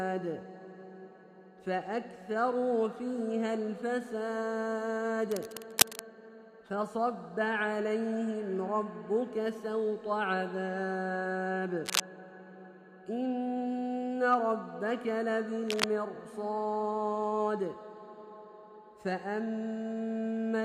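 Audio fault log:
5.31–6.00 s, 11.85–12.03 s, 15.68–15.85 s: cable scratch noise, dense uneven scratching bursts about as loud as the sound, louder in the second, likely from a worn cable or connector shifting.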